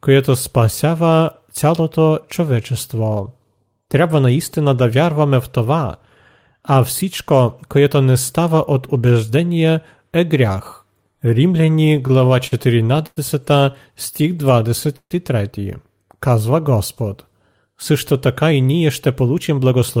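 From 11.65 to 13.18 s the speech catches and drags in eleven short hitches, the longest lasting 100 ms, and again from 14.14 to 15.12 s in six hitches up to 143 ms. These are repeated stalls (stutter). Packets arrived late, the jitter buffer kept running dry, and the receiver stretched the last sound to cover about 250 ms and 190 ms. Nothing drops out, but the flow limps.

At 16.05 to 16.69 s the speech slows to about 89% speed without changing pitch, sounding drawn out. This is a jitter buffer slow-down: the receiver repeated pitch periods to add 82 ms of reserve.

From 18.44 to 19.97 s the speech hurries at about 108% speed, pitch unchanged. This jitter buffer speed-up came from the receiver trimming around 150 ms of short pitch-period pieces to shed excess delay.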